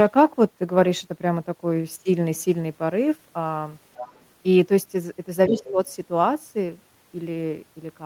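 From 3.95 to 4.23 s a second, fainter voice from the other side leaks through, sitting roughly 15 dB under the main speech. This is most likely loudspeaker playback picked up by the microphone and left behind by the echo canceller. On a spectrogram it shows as a weak, separate set of harmonic bands that do not follow the talker's own pitch track.

From 5.49 to 5.78 s the talker's speech is suppressed in double talk. Over about 200 ms of that stretch the level sinks by as much as roughly 10 dB, and the waveform envelope pinches in. The likely cause is the echo canceller turning down everything while both sides spoke at once. From 5.57 to 5.72 s the other side's voice leaks through again at roughly 15 dB below the speech, showing as faint foreign harmonics inside the dip.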